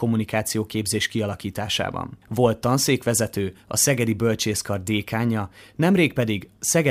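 A receiving device runs on its own clock, not locked to the sender's digital link, drifting by something like 50 ppm. Each slip drops or repeats a single sample, giving word clock ticks through the speech roughly every half second, about fifteen, from 0.38 s to 6.44 s.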